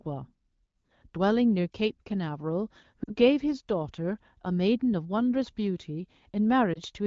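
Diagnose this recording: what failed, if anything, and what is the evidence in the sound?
Lost AMR speech frames at the network stage: the speech drops to near silence at 3.04 to 3.15 s, fitting two lost frames, and dips at 6.73 to 6.79 s, fitting one. The decoder repeats its last pitch and vocal tract settings at falling gain, so the spectrogram shows flattened, dimming harmonics and the waveform shows a sagging envelope.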